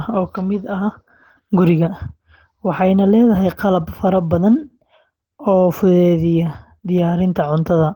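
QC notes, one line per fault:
throughout: Opus compression. A bit budget that fits about 16 kbps likely pushed the encoder into its hybrid mode, SILK for the low band and CELT above it. The speech sounds plainly hoarse and muffled, with grainy, noise-filled highs still reaching about 20 kHz.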